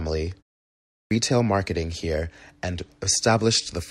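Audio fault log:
0.65–1.11 s, clipped start after a pause: after a 0.31 s silence the output device dozed off and needed 0.46 s to wake, so speech before "retail marketing here and" vanishes and it bursts in abruptly. Muted pauses would lose only background, never speech.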